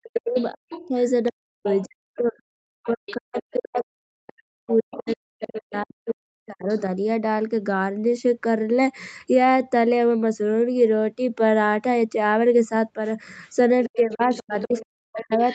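From 0.0 to 6.68 s the speech is suppressed in double talk. The level dips and breaks up in pieces, at worst by around 40 dB, for roughly five seconds in total. This is likely the echo canceller failing to separate the talker from loudspeaker echo and turning both down.

Over the same stretch, the other side's voice leaks through at 0.14 to 1.85 s, 2.84 to 3.16 s and 4.7 to 6.13 s, about 15 dB under the talker. A fainter scrap follows at 6.68 to 6.81 s, about 25 dB down. This is likely residual echo the canceller left in the microphone signal.

From 13.84 s to the end, the leak returns at about 15 dB below the talker. From 13.86 s the speech is again suppressed by up to around 40 dB.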